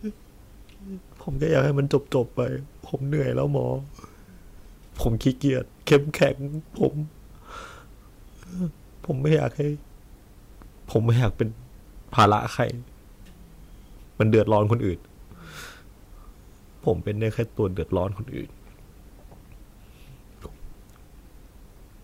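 Hard clipping in this speech clip at 5.92–6.25 s and 12.19–12.34 s (about 8 dB over), 14.21–14.73 s (about 4 dB), and briefly at 6.84, 9.33–9.35 and 10.96 s: overloaded peaks are cut flat, adding harsh high harmonics.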